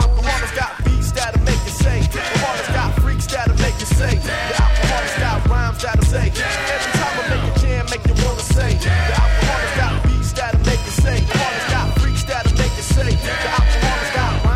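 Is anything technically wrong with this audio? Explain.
Yes. There is damaged data in the compressed stream, heard as three brief glitches at 2.21 s, 6.02 s and 11.31 s. Each one is a short chirp or blip cutting across the sound. Part of the compressed data at those points is wrong. The decoder cannot read the affected frames correctly. It loses sync and hunts for the next valid frame header. The garbled output in that gap is what you hear.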